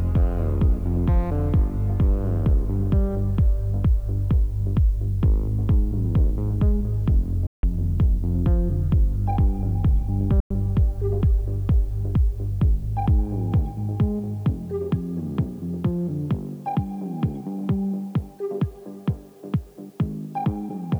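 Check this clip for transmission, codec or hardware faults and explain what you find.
Two faults are present. Throughout, low bit depth with dither, consistent with 9 bits, leaves a steady, even hiss roughly 40 dB below the signal, with no grainy distortion that would indicate undithered rounding. At 7.47–7.63 s and 10.40–10.51 s, the sound cuts to silence for about 160 ms and 100 ms, then resumes further along rather than where it stopped. This is likely a Bluetooth dropout from late, discarded packets.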